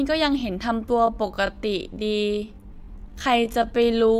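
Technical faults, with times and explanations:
0.84–4.19 s, time-stretched section: from 0.84 s the speech abruptly slows to about 0.66 times its pace with no drop in pitch, sounding dragged, likely because software lengthened this stretch by repeating short slices of audio rather than slowing playback.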